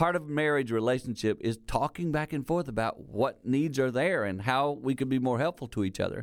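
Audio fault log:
The speech signal comes through steady and intact, with no audible technical problems anywhere in it.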